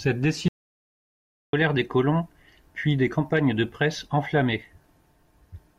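At 0.48 s the speech cuts off abruptly into dead, total silence with no room tone beneath it, and resumes mid-flow at 1.53 s, about 1.05 s of material simply gone. This audio dropout to silence most likely came from input loss while the recorder kept writing zeros.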